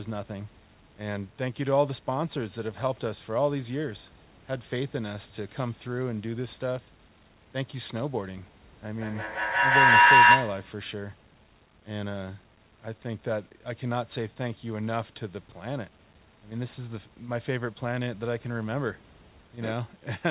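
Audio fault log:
8.88–10.81 s feedback howl: a tone near 1 kHz, from a loop repeating every 150 ms or so, swells to about 13 dB over the speech as each loop trip adds level. Echo would fade instead.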